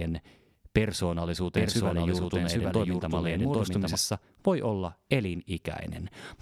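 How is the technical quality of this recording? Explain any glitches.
The recording has one clear glitch: a stretch of the speech plays twice at once.

From 1.57 s to 3.95 s, just before "voi olla", a doubled audio track appears. A second full-band copy of the speech runs roughly 0.7 s behind the original, about as loud, with no decay or room colour, and it cuts in and out abruptly at both ends. The likely cause is that the same audio was captured a second time through a slower path, or that an edit left two copies out of step.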